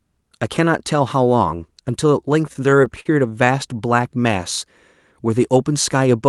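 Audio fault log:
2.53–3.49 s, repeated stalls (stutter): The audio catches eight times in under a second. The data reaching the player kept falling behind the playback rate, so its buffer ran dry again and again. Each time, the player held the last sound instead of going silent, fading it during the longer holds. The stalls add up to about 118 ms, roughly an eighth of that stretch, and the longest is 46 ms. Nothing is lost, but the sound drags and jerks.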